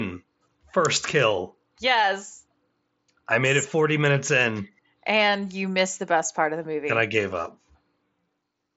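No technical faults found.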